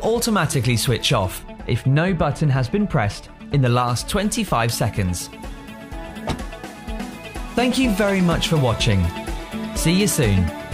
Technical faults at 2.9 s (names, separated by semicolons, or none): de-emphasis applied wrongly